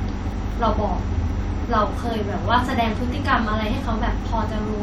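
No technical faults can be heard anywhere in the recording.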